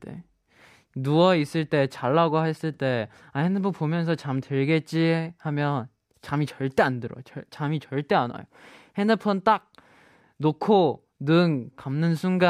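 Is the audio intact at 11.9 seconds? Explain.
Yes, the speech at 11.9 seconds plays through cleanly, with no dropout, click, distortion or other fault at that moment.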